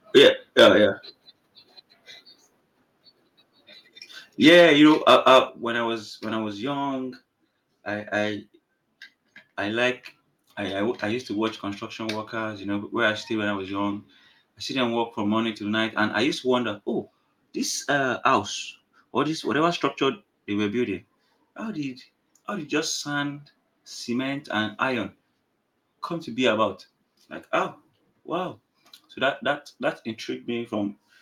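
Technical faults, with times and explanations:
0.16–0.28 s, 0.59–0.69 s and 4.46–5.39 s, microphone overload: the loudest speech peaks are flattened, with the first two short bursts driven about 6 to 7 dB past full scale and a lighter, longer stretch near 4.5 to 5.4 s. The cause is likely an input set too hot for the converter, so waveform tops are sliced off and the harsh crackle rides on the syllables themselves. A codec artefact would instead smear or warble the sound without that hard, peak-locked grit.
0.18 s, 4.49 s and 5.49 s, microphone volume stepped down: the whole signal, speech and background together, drops in one sudden step, by about 2 dB at the first two points and about 7 dB at 5.49 s. This is likely call software cutting the device's input volume after detecting clipping, which is why each step lands inside or just after an overload. A fade or compressor would ease the level down, and a dropout would silence it.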